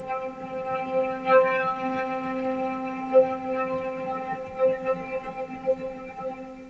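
Throughout the clip, held sounds and tails sink and swell by around 5 dB while attacks come through, so the audio pumps and thins. A noise suppressor applied to music or sounds is mistaking sustained tones and ambience for noise within the call's 8 kHz-limited band.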